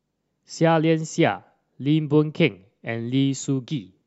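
There are no technical faults in this recording to describe in time order.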